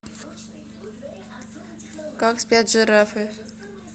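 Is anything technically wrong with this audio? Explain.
No, nothing is technically wrong with this speech recording: it comes through a call path whose codec carries the audio up to 8 kHz, which fits Opus running at a moderate bitrate, and the signal shows no faults.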